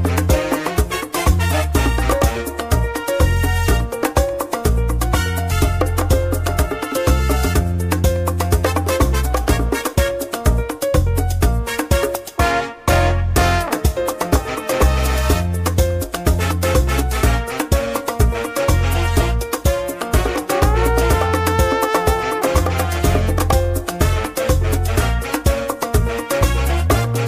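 No technical faults are audible anywhere in the sound, so there is nothing to time or trace to a cause.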